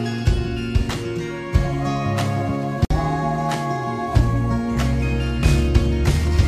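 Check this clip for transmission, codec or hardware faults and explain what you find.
There is one fault. At 2.85 s the sound drops out for about 55 ms, then resumes exactly where it left off, with softened edges. This is a gap at a join of encoded pieces: separately encoded segments were spliced without trimming the encoder's start delay and final-frame padding.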